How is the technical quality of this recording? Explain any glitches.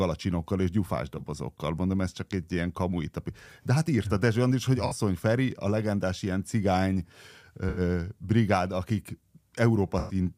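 The recording has four brief glitches, all from AAC frame loss with concealment. They occur at 1.18 to 1.21 s, right after "és gyufás"; at 4.87 to 4.92 s; at 7.69 to 7.80 s, just before "brigád akik"; and at 9.99 to 10.15 s. The missing audio spans 21, 43, 85 and 107 ms, which fits one to five lost frames. The decoder fills each gap by reusing the last good spectrum. The shortest sounds like a smeared, noisy blip. The longer ones stretch that smeared patch out further.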